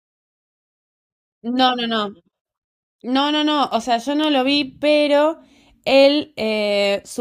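Speech clip with word clock ticks: an unlocked receiver clock, likely around 40 ppm off, slips a sample roughly every half second, giving about fifteen sharp ticks from 0.59 to 6.85 s.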